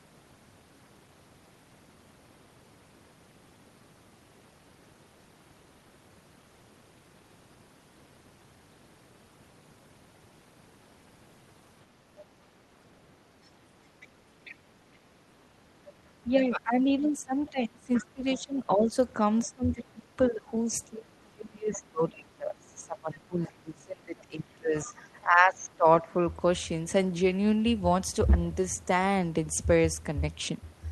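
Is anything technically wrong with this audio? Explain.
Yes. Faint scraps of a second voice come through at 14.0–14.07 s, 14.45–14.55 s, 17.94–18.02 s and 21.73–21.78 s, roughly 20 to 30 dB under the main speech. This is other-side voice leaking through, likely loudspeaker echo that the echo canceller failed to fully remove from the microphone.

From 15.65 to 18.97 s and again from 19.44 to 26.16 s, the main speech repeatedly sinks, by as much as about 20 and 25 dB, for roughly 3 and 5 seconds in total. This is speech suppressed in double talk: with both sides talking at once, the canceller likely treated the talker's own voice as echo and turned it down along with the leak.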